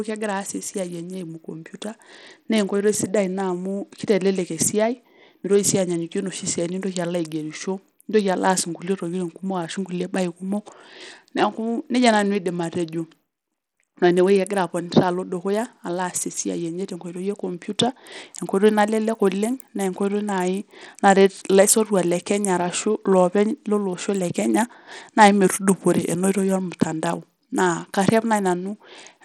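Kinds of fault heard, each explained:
Bluetooth SBC compression: Throughout the speech the upper frequencies sound thin and unstable, with a gritty, grainy layer over the voice. This is likely SBC coding with a small bit pool, in keeping with a rate near 80 kbps, so the weak top sub-bands are starved of bits and the rest coarsely quantised. On a spectrogram the treble appears patchy and flickering, with blocky gaps and a speckled noise floor; the waveform itself looks largely unchanged.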